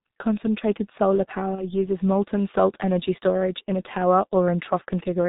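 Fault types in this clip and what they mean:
G.723.1 codec: heavy low-rate telephony coding, consistent with about 6.3 kbit/s, leaves hoarse, muffled speech; the spectrogram is empty above 4 kHz, with smeared consonants.
VoIP packet loss concealed by the speech codec: 1.55–1.73 s is stretched and fades, fitting one lost 30 ms frame; the waveform shows a decaying level.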